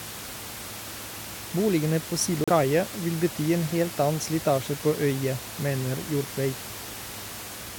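At 2.44 s the speech drops to silence for about 36 ms and resumes just before "vil bety en helt", likely a Bluetooth stall where the buffer ran dry awaiting resent packets. The waveform shows a flat gap, and the spectrogram a blank vertical band, even the room noise about 12 dB below speech vanishing.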